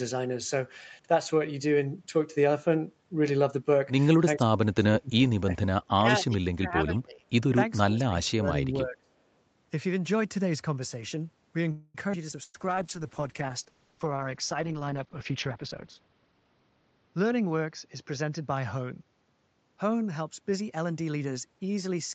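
Between 4.37 and 9.15 s the speech is suppressed in double talk four times: 4.37–5.52 s, 5.94–6.05 s, 6.21–7.25 s and 7.83–9.15 s. The likely cause is that the far end was talking at the same moment, so the echo canceller could not tell this talker from loudspeaker echo and turned everything down. The level sinks by as much as about 30 dB in the first stretch and about 20 to 25 dB in the others. The speech seems to duck away or break into fragments. On the waveform the envelope pinches in abruptly. On the spectrogram these stretches go faint, and the upper harmonics thin out.

At 11.71 s a call audio freeze sets in and lasts until 11.97 s. This was likely packets held up in transit, which left the jitter buffer empty. For about 230 ms the receiver extends the last sound as a fading buzz or hiss, and then the speech carries on from exactly where it stopped, with nothing lost. The spectrogram shows a smeared, horizontally stretched patch with flat, frozen partials that decay. 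After it there is a gap that was not in the original timing.

Two skip-ahead events follow, at 12.12 s and at 12.31 s. Here the playback jumps forward and drops roughly 100 ms of audio at the first and roughly 70 ms at the second, with almost no fill between the two sides. They sound like clipped syllables or tiny stumbles. On the waveform the shape changes abruptly at a near-seamless splice, and on the spectrogram the formant tracks break and reappear at different positions.

From 12.44 to 12.57 s there is a burst of packet loss. About 60 ms of audio is missing. The receiver fills about 100 ms by continuing and fading the last sound, ending in a brief 10 ms of silence. It comes across as a held buzz or fading hiss before the speech resumes further on. The spectrogram shows a short band of frozen harmonics fading to black, followed by a discontinuity.

A call bitrate drop begins at 12.52 s, with the Opus encoder falling from 48 to 8 kbps. 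It stays at the lowest rate for about 3.4 s and lasts until 21.56 s. The sound becomes rough, watery and muffled compared with the earlier part, where the call path carried content up to 8 kHz. On the spectrogram the upper band is cut away well below 8 kHz, and what remains looks blocky and smeared.

From 12.58 to 13.64 s a jitter buffer slow-down stretches the audio to 88% speed by repeating pitch periods, which adds 132 ms. The pitch is unchanged, but the syllables drag. On the spectrogram the harmonics keep their spacing while the features are stretched in time. The waveform shows cycles repeated one after another.

From 15.20 to 16.46 s a jitter buffer speed-up does the reverse. It runs at 118% speed by cutting out short pitch-period pieces, about 200 ms in total. The speech sounds hurried and clipped, while the pitch stays the same. The spectrogram shows time-compressed syllables with the harmonic spacing intact, and the waveform has small splice points where cycles are missing.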